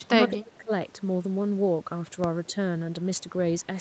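From 0.01 to 0.72 s the speech sinks deeply, by roughly 25 dB. At 2.47 to 2.56 s it dips only slightly. This is likely speech suppressed in double talk. The echo canceller turned down the near talker along with the echo.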